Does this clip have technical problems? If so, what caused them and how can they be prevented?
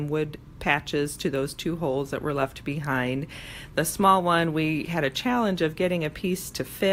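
No, nothing technical goes wrong in this one, so there's nothing to trace back or guard against here.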